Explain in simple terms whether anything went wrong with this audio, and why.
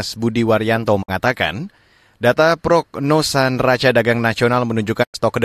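A digital broadcast dropout cuts the speech twice, at 1.01–1.10 s and 5.02–5.16 s. The receiver lost valid frames, quickly faded to silence, and resumed afterwards.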